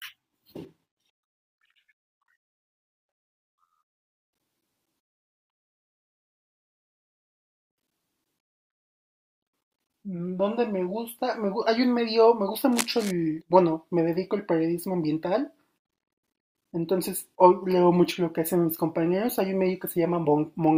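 From 12.72 to 13.11 s, a burst of cable scratch noise runs over the speech for roughly 0.39 s. It is a dense, irregular crackling and rustling, sitting only around 10 dB below the speech. The likely cause is a worn cable, connector or control being moved. That would make the contact resistance fluctuate rapidly, injecting uneven bursts of noise into the signal path for as long as the contact was disturbed.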